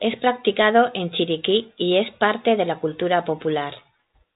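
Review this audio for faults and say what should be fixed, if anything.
Nothing here needs fixing; the speech stays within a telephone band topping out near 3.8 kHz, as expected of a 40 kbit/s narrowband coding path.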